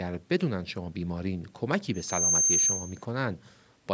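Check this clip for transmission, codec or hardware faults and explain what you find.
One fault is present: a loudspeaker feedback squeal. From 1.94 s to 3.04 s a steady tone at 6.3 kHz swells over roughly a third of a second until it sits about 10 dB above the speech. The microphone is picking up the loudspeaker it feeds, and at that frequency the loop gain exceeds one, so the tone keeps reinforcing itself. On a spectrogram it appears as a bright horizontal line at 6.3 kHz, below the 8 kHz ceiling of the call's microphone path, and the waveform envelope swells accordingly.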